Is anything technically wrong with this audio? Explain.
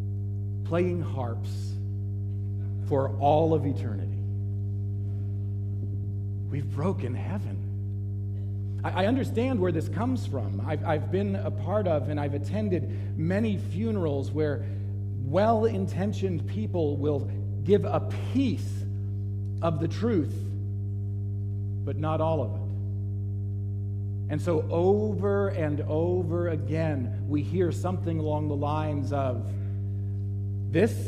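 Yes. A mains hum runs through the whole clip, a steady low tone at 50 Hz, roughly as loud as the wanted sound itself. Power-line current is leaking into the signal path, most plausibly through a ground loop or a transformer sitting close to the cabling. What separates it from low-frequency rumble is its fixed pitch: rumble is broadband and shifts with handling or traffic, while this hum holds one unchanging note, with some low harmonics stacked at multiples of 50 Hz.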